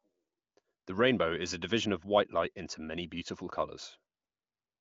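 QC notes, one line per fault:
No faults heard.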